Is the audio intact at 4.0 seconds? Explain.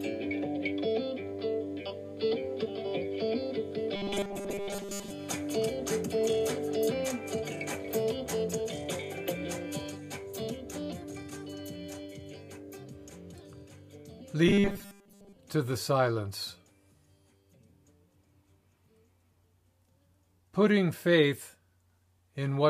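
No, robotic sound from repeated short buffers runs from 3.96 to 5.10 s. Audio likely arrived too seldom, so a roughly 5 ms buffer was replayed over much of the sound, producing a rigid metallic buzz at 200 Hz.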